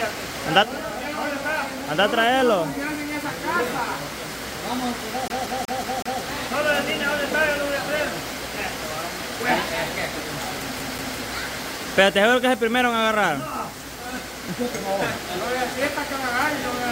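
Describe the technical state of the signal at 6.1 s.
CD stuck on one turn, from 5.28 to 6.21 s, so 6.1 s falls inside the final stretch of it. A scratch keeps knocking the laser back one track at the same point of each rotation, so a slice of about 0.19 s plays five times in a row, with a brief mute at every jump back. The result is a rapid, perfectly regular stutter, the familiar sound of a skipping CD.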